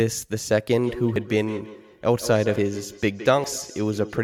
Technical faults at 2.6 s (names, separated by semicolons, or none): feedback echo between two devices; dropped buffer (overrun)